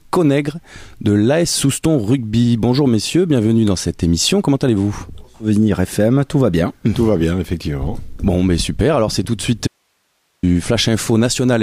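The audio has one fault, an audio dropout to a faint residue. It runs from 9.67 s to 10.43 s, about 0.76 s. The sound stops abruptly mid-flow and returns just as abruptly. Nothing fades. Only hiss fills the gap, roughly 50 dB below the normal level. The wanted signal was likely lost briefly somewhere upstream while the path after the break stayed live, so its noise floor carried on.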